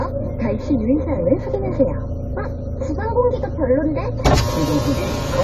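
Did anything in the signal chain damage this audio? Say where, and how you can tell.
Yes. AAC compression damage runs throughout the clip, at the codec stage. Nothing is present above 14.1 kHz, and the sound is plainly dull and smeared. This is likely AAC-LC quantising the spectrum coarsely at a low bitrate, consistent with about 32 kbps, and cutting the top band.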